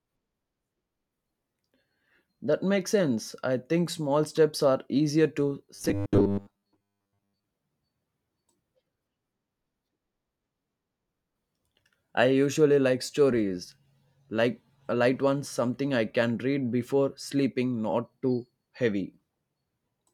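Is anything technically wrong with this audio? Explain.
Yes. From 5.75 to 7.47 s there is robotic sound from repeated short buffers. Fresh audio likely arrived too seldom, so playback looped roughly 10 ms chunks through most of that stretch while real audio was skipped. The looping imposes a fixed 100 Hz buzz, turning the speech rigid and metallic.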